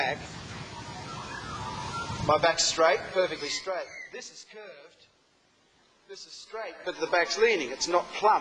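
From 6.39 to 7.1 s, zipper noise appears as the level changes by about 20 dB. The gain moves in discrete unsmoothed steps, around a hundred per second, and each jump adds a small click, giving a rapid ticking buzz over the sound.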